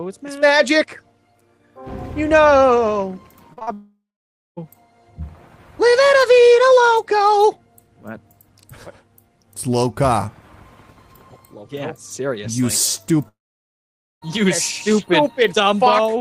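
From 3.53 to 3.69 s, three short concealed packet losses follow one another, at 3.53, 3.59 and 3.63 s. Gaps of roughly 40, 20 and 40 ms were filled by extending the preceding sound, giving a brief smear or wobble rather than a break, because the audio carries straight on.

At 3.73 to 4.59 s and again at 13.28 to 14.24 s, the sound turns into a fading continuation, then silence for about 0.54 s and 0.87 s, before resuming with a stretch missing. This is likely a long network dropout. The audible hole and the skipped material set it apart from the short smears.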